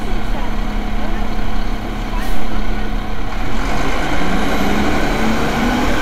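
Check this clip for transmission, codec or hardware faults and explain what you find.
Nothing stood out on listening to this audio.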